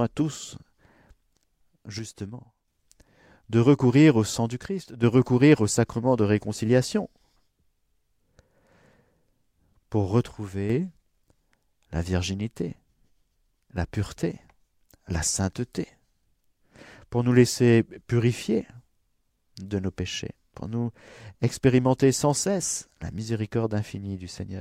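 A speech clip with three abrupt level dips of about 6 dB, from 1.99 to 2.68 s, 4.66 to 5.03 s (between "recourir au sang du" and "recourir au sacrement de"), and 10.26 to 10.70 s. The likely cause is one channel dropping out, halving the mono sum.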